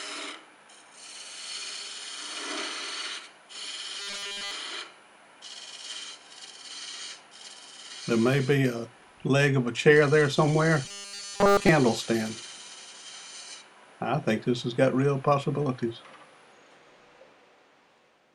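From 4.00 to 4.51 s and again from 10.85 to 11.69 s, the sound collapses into a rigid metallic buzz at 200 Hz: robotic sound from repeated short buffers, likely a 5 ms chunk looped while the real audio is skipped.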